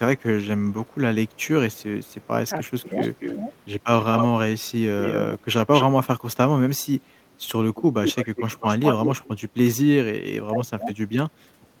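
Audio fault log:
0.18–4.26 s, 5.04–5.85 s, 7.75–9.3 s: echo leak. A delayed copy of the speech trails the talker, at 295 ms, then 243 ms, then 192 ms, about 10 dB down at first and about 5 dB down later. Likely a loudspeaker-side echo canceller passing its microphone pickup back.
10.49–10.86 s: speech suppressed in double talk. The speech dips by about 20 dB and breaks up over about 0.3 s while both sides talk at once. Likely the echo canceller could not separate the talker from the loudspeaker echo, so it attenuated both together.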